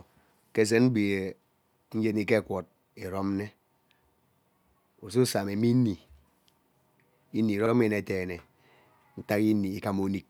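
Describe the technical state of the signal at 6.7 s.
At 6.7 s the speech signal is intact, with no audible fault at that moment.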